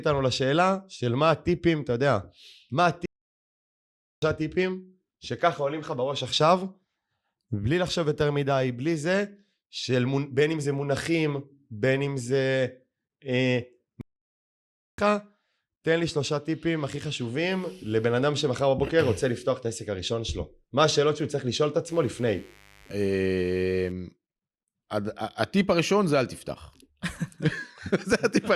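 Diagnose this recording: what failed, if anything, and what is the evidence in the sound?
Playback stall at the playback stage. The speech cuts to silence at 3.06 s for 1.17 s, and at 14.01 s for 0.97 s. The likely cause is a starved or blocked player.

Mains buzz from the analogue wiring. A raspy buzz runs from 21.88 to 23.92 s, around 30 dB down. Switching spikes inject 50 Hz harmonics.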